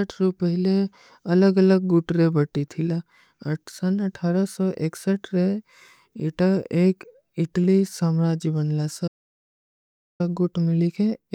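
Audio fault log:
9.08–10.20 s audio dropout to silence: speech cuts to silence for 1.12 s, likely a lost input; the waveform flatlines and the spectrogram goes completely blank, with no room tone.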